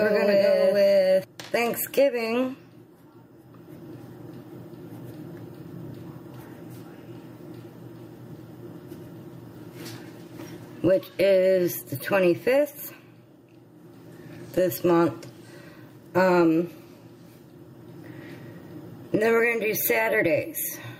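Input gain set far too high, with a fast limiter or compressor clamping it back down, is the likely cause of the gain pumping that runs through the whole recording. Every loud sound drags the level down, so the level swings by roughly 10 dB. The result is squashed, with loud and soft passages pressed close together. The other fault is a doubled audio track, likely from a second, slower capture path or an edit that left two copies out of step. It is already under way when the clip begins and stops abruptly at 1.24 s. A full-band copy trails the original by about half a second at roughly the same level, with no decay or room colour, so everything in that opening stretch is heard twice in a flat, mechanical repeat.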